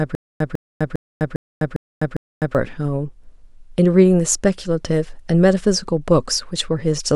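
From the start until 2.55 s there is a stutter with silent gaps. One 150 ms burst returns six times, every 403 ms, separated by 253 ms of digital silence. A waveform shows identical blocks between flat lines, likely from a stalled stream replaying its last fragment.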